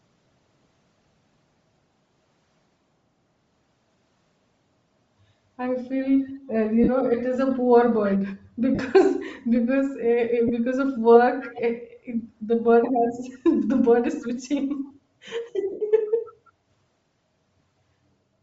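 Throughout the speech, the upper range has a breathy, grainy sheen, plainly audible. That fits Bluetooth LC3 compression, likely at around 32 kbps with 7.5 ms frames, where the codec discards much of the treble and fills it with noise.

At 6.28 to 6.36 s, a very faint delayed copy of the speech surfaces, trailing the original by 329 ms. It is likely an echo leak: the far end's loudspeaker output reaches its microphone, and its echo canceller is passing some of it back.

At 6.84 to 6.89 s, the sound briefly smears into noisy hash. These are lost LE Audio frames, and the decoder is papering over the gap by replaying the last spectrum with scrambled phase. The 37.5 ms gap fits five 7.5 ms frames.

The echo returns at 8.08 to 8.14 s, noticeably stronger this time. A similar 37.5 ms smear follows at 8.75 to 8.79 s, then a shorter 22.5 ms one at 10.48 to 10.51 s.

At 11.4 to 11.6 s and again at 14.2 to 14.29 s, the 329 ms echo leak comes back, fairly strong in the first instance and a little weaker in the second.

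The longest frame loss, 97.5 ms, runs from 15.71 to 15.81 s. Here the noisy concealment fades as it goes.

A faint echo then trails on from 16.06 to 16.33 s.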